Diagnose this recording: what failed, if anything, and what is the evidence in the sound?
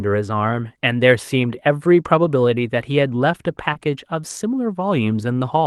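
At 0.63 s and again at 3.75 s the speech turns briefly rougher and noisier for 20 ms, with no gap. This is a lost packet rebuilt from error correction at the network stage: the following Opus packet carried a low-bitrate copy, and the decoder played that coarser version instead.

At 3.73 s, running to 3.77 s, there is a short smear where the sound carries on unnaturally before the real audio returns. This is short concealed packet loss, again at the network stage: 20 ms arrived too late, so the receiver extrapolated the preceding sound and blended back.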